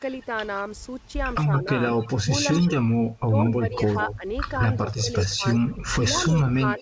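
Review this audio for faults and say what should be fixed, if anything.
Echo leak: a delayed copy of the speech trails the original by about 0.17 s. It appears at 0.20–0.26 s (about 35 dB below the speech), 1.54–4.15 s (about 15 dB down, the most audible stretch) and 4.87–6.81 s (about 20 dB down). The likely cause is a loudspeaker-side echo canceller passing part of its microphone pickup back into the call. To prevent it, tune or replace that device's echo canceller so it adapts to the roughly 170 ms echo path.

Speech suppressed in double talk: from 2.22 to 4.25 s the speech is turned down while the other side talks, for about 0.7 s in total and by up to about 25 dB. From 4.85 s to the end it dips by up to about 10 dB. The likely cause is the echo canceller failing to separate local talk from loudspeaker echo and attenuating both. To prevent it, use a canceller with proper double-talk detection so local speech passes at full level.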